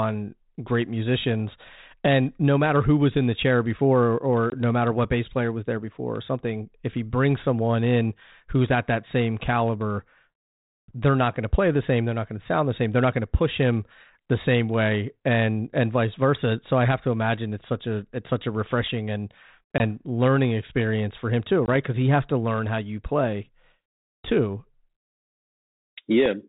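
Hard-edged silent gaps break the speech at 4.50 s before "no matter what bass", at 19.78 s after "such a refreshing and", and at 21.66 s after "experience for him too", with distorted speech as each gap ends. This is packet loss on an ADPCM call. About 20 ms went missing each time, which fits a single lost packet. The decoder's adaptive predictor and step size then drifted from the sender's until they resettled.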